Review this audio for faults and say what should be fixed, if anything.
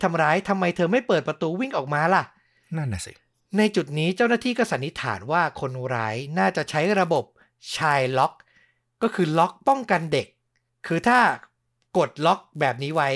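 From 6.59 s onward the resampler restarted on every 10 ms block, so the errors at each block edge produce a 100 Hz buzz under the speech. To prevent it, run the 48 kHz to 24 kHz converter as one continuous stream that carries its filter history across block boundaries.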